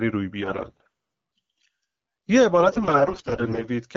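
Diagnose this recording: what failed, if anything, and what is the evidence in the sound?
The failure is AMR bit errors on the network link, carried over AMR-WB coding at 12.65 kbit/s. From 0.42 to 0.88 s the speech turns hoarse and scratchy, but pitch and level hold. From 2.60 to 3.69 s it gets worse, gargly and rough, which points to roughly double the error rate. Flipped low-priority bits misplace the excitation pulses and skew fine pitch, gain and spectral values. The protected core bits survive, so the frames still decode.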